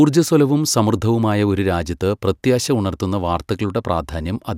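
No technical faults can be heard anywhere in the speech recording, and the signal stays intact and continuous throughout.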